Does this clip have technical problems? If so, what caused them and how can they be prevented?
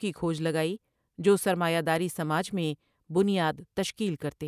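No, the speech signal shows no technical faults, so nothing here needs fixing or preventing.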